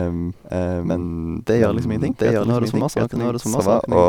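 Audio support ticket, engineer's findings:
Doubled audio track throughout. Full-band copy trails by about 0.7 s at roughly equal level, no decay. Likely a second, slower capture path mixed in.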